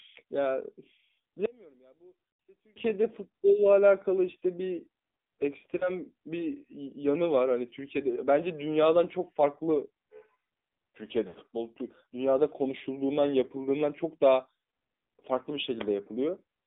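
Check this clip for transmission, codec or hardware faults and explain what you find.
Three faults are audible in this speech clip: mobile codec coloration throughout, a mono-cancellation dropout, and two brief concealment glitches.

AMR narrowband mobile codec, throughout: the sound is confined to about 200 Hz to 3.7 kHz with a buzzy, synthetic edge, pointing to AMR-NB near 7.4 kbps. It is a codec artefact rather than a simple filter.

One channel inverted, 1.46 to 2.76 s: centred speech drops by about 30 dB, likely from reversed polarity on one side cancelling when summed to mono. That distinguishes it from a gain dropout.

Lost AMR speech frames, 5.78 s and 11.28 to 11.36 s: the first is a brief warble, fitting one lost frame. The second is drawn out and fading, fitting three consecutive frames concealed with decaying gain rather than sharp clicks.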